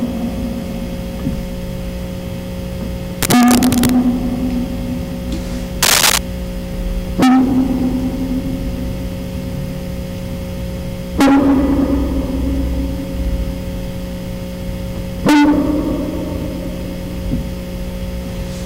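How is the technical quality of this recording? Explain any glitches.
The technical quality is poor: the music is heavily distorted throughout, and two short bursts of scratching noise cut across it.

Hard clipping runs through the whole recording. The signal is driven about 44 dB beyond what the chain can pass, so the peaks are sliced flat, on the order of 7 percent of samples. Those flat tops generate dense upper harmonics, heard as a harsh fuzz on every loud passage.

Cable scratch noise appears from 3.22 to 3.90 s, roughly as loud as the music, and again from 5.83 to 6.19 s, somewhat louder than it. These are uneven, crackling rustles, likely from a worn cable or connector being moved so its contact resistance fluctuated rapidly.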